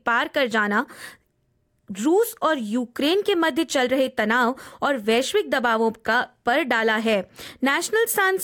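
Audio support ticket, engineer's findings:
Listened to the whole clip and heard nothing wrong with the audio path, so there's nothing to chase on this ticket.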